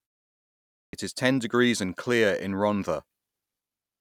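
Speech with a clipped start after a pause: after about 0.89 s of silence, roughly 42 ms is swallowed, so "is ten degrees and" bursts in abruptly, as the output device wakes late.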